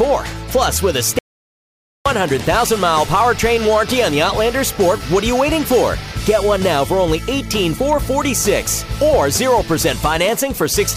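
At 1.19 s the sound cuts out abruptly and stays fully silent until 2.06 s, about 0.87 s lost. This is an audio dropout to silence, likely a lost input written as silence. Unlike a quiet pause, no room tone remains; the signal simply vanishes mid-flow.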